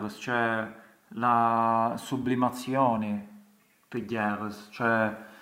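No technical faults are audible.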